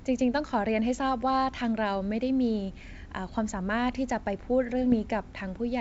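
Bit errors on an ADPCM link appear from 4.90 to 5.13 s, near the end of the speech, over the G.722 wideband path, whose clean lower band fits its full-rate mode. Flipped bits corrupt the decoder's step size and predictor, so each error rings on briefly instead of staying a single click. The result is a short cluster of pops and rough, gritty bursts with quick level jumps, consistent with a low error rate on the order of a tenth of a percent.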